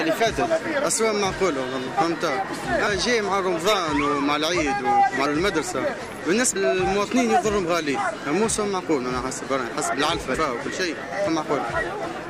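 Brief smeared blips, each with the audio leaping ahead, occur at 1.86, 2.86, 5.25, 6.55, 10.34 and 11.26 s. Roughly 300, 400, 200, 200, 500 and 200 ms of material goes missing at those points. These are compressed frames skipped: whole frames were never decoded. The jump sizes fit a frame length near 23 ms. Overlapping neighbouring frames soften each join, so it blurs rather than clicks.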